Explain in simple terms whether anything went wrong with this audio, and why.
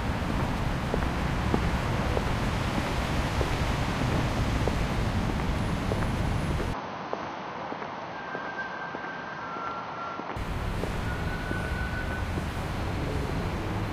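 Something did go wrong between 6.74 and 10.36 seconds. The everyday sounds abruptly turn duller and slightly quieter, with everything above about 6.3 kHz missing, and a faint new background noise appears. There is no gap at the changeover, and the fuller sound returns at 10.36 seconds. The likely cause is an input switched to a poorer device: the recording briefly took its sound from a narrower-band microphone with its own level and noise.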